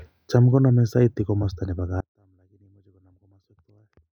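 At 2.01 s, after "konome saiti komosto nebo", the speech drops abruptly to a faint residue about 35 dB down. This audio dropout lasts to the end, likely a lost signal feed.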